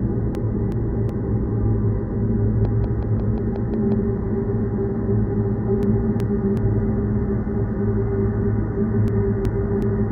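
From 0.35 to 1.10 s, a frames out of order fault makes the sound stutter and flutter. Two adjacent blocks of about 0.37 s each play in swapped sequence, which fits runs of four codec frames decoded in the wrong order. Unlike a dropout, nothing is missing and the timing afterwards stays intact. The material is only reshuffled.

From 2.65 to 3.93 s, a train of clicks ticks over the audio, about seven of them at a steady 5.5 per second. Each peaks a few dB above the surrounding sound. The clicks share the same shape and spacing, which sets them apart from random crackle or dust noise. They most likely come from electrical interference or a faulty connection injecting pulses.

The same frame swap returns from 5.83 to 6.57 s and again from 9.08 to 9.83 s. Each time, two 0.37 s halves are exchanged, with the same garbled flutter.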